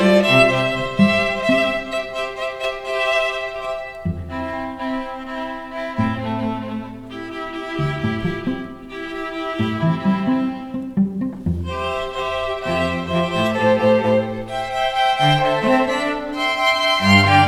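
No technical faults can be heard anywhere in the recording, and the signal holds steady throughout.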